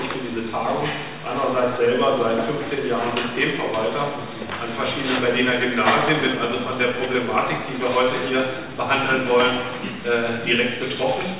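No technical faults can be heard anywhere in the audio. Nothing in the recording or playback chain draws attention to itself at any point.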